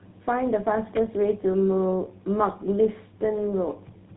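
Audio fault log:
throughout: tandem speech coding. The speech passes through two speech codecs in a row, consistent with AMR-NB and then GSM full rate, with G.711 between them. Each one recodes the other's errors, so the sound is rough, muffled and warbly. A spectrogram shows nothing above 3.8 kHz and smeared, blotchy harmonics.
0.96 s: electrical switching spike. A sharp, brief snap sits on top of the speech, most likely an arc from a nearby switch or static discharge picked up by the line. The waveform shows a narrow vertical spike, and the spectrogram shows a thin full-height stripe.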